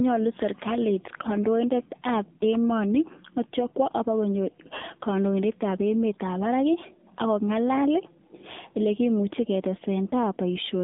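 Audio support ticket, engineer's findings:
AMR narrowband mobile codec in path, whole clip. Speech squeezed through AMR-NB at a low mode, consistent with 7.4 kbps. Line band 150 Hz to 3.6 kHz, nothing above 3.7 kHz. Vocal-tract model plus sparse pulses per 5 ms subframe leaves voice buzzy and synthetic, with plainly audible codec damage.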